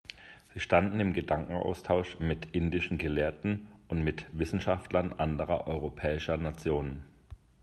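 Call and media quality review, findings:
Clock drift between sender and receiver: slight, uneven hiccups across the whole clip. Sender clock runs around 4% fast; receiver jitter buffer keeps overfilling, so playout must shed audio to stay in step. Opus call path, highs stopping near 12 kHz.

Repeated timing corrections: 0.01–7.57 s, small cuts throughout, all in one direction at irregular spacing, net pace 104%. Jitter buffer dropping short pieces to track the faster sender. Heard as unsteady tempo and faint stumbles in the speech.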